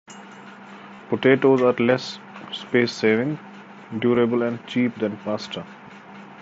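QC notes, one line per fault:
0.95 to 0.99 s and 4.15 s, concealed Bluetooth headset packet loss: the first spot brings a brief buzzy, steady tone held at full level for about 40 ms, with a slight warble as real sound resumes. The second is a tiny, nearly hidden hiccup. Dropped headset packets were filled by repeating the best-matching recent stretch of waveform. The longer gap fits a run of about five 7.5 ms frames, and the shorter one a single frame, in the mSBC wideband stream.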